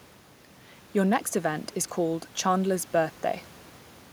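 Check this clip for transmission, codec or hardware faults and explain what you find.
No faults can be heard in this speech.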